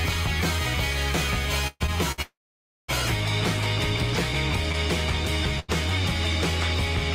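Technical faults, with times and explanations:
1.67–1.82 s and 2.22–2.90 s, call audio freeze: the sound likely stops because packets were held up and the jitter buffer ran empty. The last sound carries on as a fading buzz or hiss, then drops out, for about 20 ms in the first case and 560 ms in the second. On resuming, nothing is lost, but playback now runs 130 ms later, and then a further 666 ms later. A spectrogram shows smeared, flattened bands thinning into a dark gap, and the waveform shows a decaying envelope flattening out before normal sound returns.
2.12 s to 2.20 s and 5.60 s to 5.70 s, short stall from a late packet: a packet arrived after it was due, so the receiver stretched the final sound for 60 ms and then 89 ms until it came, then carried on from the same point. No audio is missing, but one sound is held too long, with a slight buzz or dip. On a spectrogram, one frame's pattern is repeated sideways as steady horizontal streaks, and the waveform shows a short, evenly repeating stretch with a small amplitude sag.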